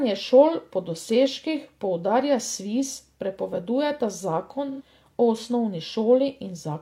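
At 4.70 s the speech turns briefly smeared and hazy, lasting about 85 ms until 4.82 s. This is AAC frame loss with concealment: data went missing, which fits about two lost frames, and the decoder rebuilt the gap from the last good spectrum with randomised phase. The result is a noisy, phasey blur that holds the preceding tone colour. A plain dropout would fall silent or click, and this gap stays filled and is too short to fade toward silence.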